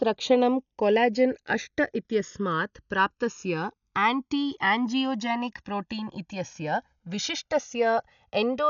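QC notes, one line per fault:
throughout, channels drifting apart: two clocks about 150 ppm apart let the delay between channels creep to about 1.5 ms, so sweeping comb notches sound like slow flanging.
throughout, likely Dolby Digital compression: heavy coding that fits a 48 kbps rate leaves nothing above 7 kHz, so the speech is dull, with rough, fluttering noise around tones.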